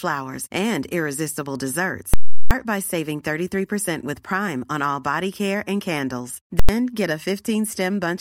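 After "and irresistible", from 2.14 to 2.51 s, invalid numbers at full scale pin the output at its limit, giving a loud pop, silence, then another pop before "by saving". At 6.60 to 6.69 s, after "body care and candles", the shorter block gives one bang. Unlike clipping, no sound survives underneath.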